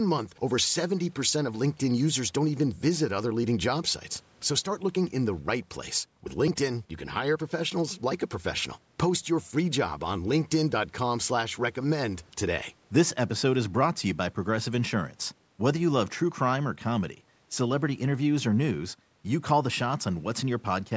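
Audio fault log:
No faults found: the speech shows only normal call microphone processing, with the lowest bass trimmed and no content above 8 kHz.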